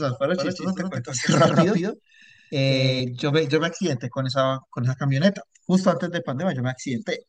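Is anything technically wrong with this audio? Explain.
Yes. From 0.38 to 3.0 s the speech has a doubled audio track: a full-band copy trails by around 150 ms, roughly 5 dB quieter, with no decay or room colour. It likely comes from a second, slower capture path, and it starts and stops abruptly.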